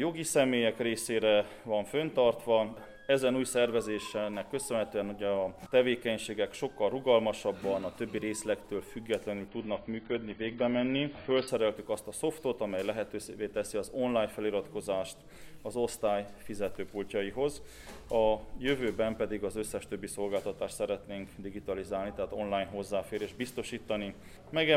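At 9.48 s the sound abruptly goes dull and thin. That's the adaptive stream dropping to a lower bitrate for about two seconds, presumably because the connection slowed. Everything above roughly 5 kHz is gone, and what's left picks up codec artefacts, which fits a switch to something like a 16 kbit/s version. There's no gap at either edge. At 11.48 s the full treble snaps straight back.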